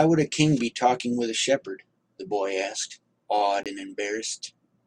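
A block of digital silence at 3.63 to 3.66 s: about 23 ms of speech drops abruptly to silence, fitting a 1024-sample buffer left unfilled.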